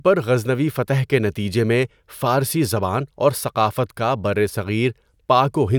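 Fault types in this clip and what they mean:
No faults detected in this speech recording; nothing audible to flag.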